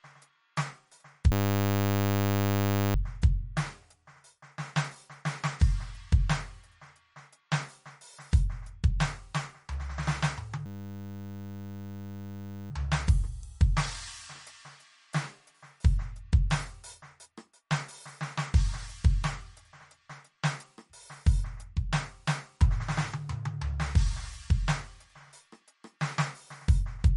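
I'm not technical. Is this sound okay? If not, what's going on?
No, there are two problems.

First, a system hang loop. Twice the computer seems to have frozen while its sound hardware kept replaying the same tiny scrap of audio, just 10 milliseconds long, over and over. That happens from 1.32 to 2.95 seconds and again from 10.66 to 12.71 seconds. Because the scrap repeats 100 times a second, the music turns into a steady buzz there. When it resumes, almost nothing of the music appears to be missing.

Second, the whole piece sounds heavily squeezed, most likely by MP3 compression saving space by throwing detail away. Everything above 11.2 kHz is gone, so the music sounds dull with no sparkle at the top. The quieter details flicker in and out, which gives a watery, swirly quality, with metallic chirps on bright sounds and blurred sharp starts.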